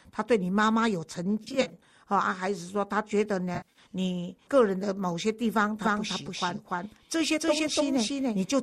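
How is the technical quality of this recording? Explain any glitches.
The recording has two kinds of glitch: a pair of brief dropout patches in the first half, and a doubled sound that runs from just before the six-second mark to the end. Underneath it all the speech carries a light, faintly grainy texture, likely from low-delay AAC coding at a rate around 64 kbps.

AAC frame loss with concealment occurs at 1.44 to 1.73 s and again at 3.55 to 3.79 s. In each case about 140 ms of coded audio went missing, spread across roughly 260 ms in the first event and 200 ms in the second. The loss pattern fits short frames of about 10 ms each. The decoder patched each gap by reusing the last good spectrum with randomised detail, which produces a smeared, noisy, phasey blur. The longest unbroken gaps were a few tens of milliseconds in the first event and around 70 ms in the second.

A doubled audio track starts at 5.83 s and continues to the end. 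A second full-band copy of the speech trails the original by about 300 ms at roughly the same level. It has no reverberant tail or room colouring, so it sounds like a hard echo rather than a space. It begins abruptly instead of building up. The likely cause is the signal being captured twice, once through a slower path.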